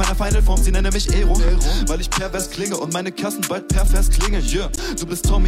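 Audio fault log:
1.48–1.51 s, loud pop: one sharp pop about 10 dB above the sound, which carries on underneath, likely a voltage spike from a plug, switch or static.
4.74–4.79 s, damaged data in a compressed stream: a brief blip where corrupted bytes threw the decoder out of sync until it found the next frame header.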